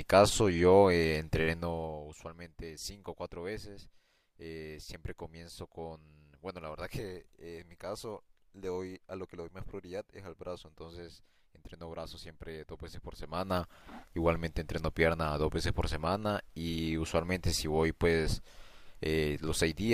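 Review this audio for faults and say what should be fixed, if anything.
Nothing needs fixing, as no faults can be heard in the speech. The smooth level changes behave as a fader would, rising and falling gradually without jumps.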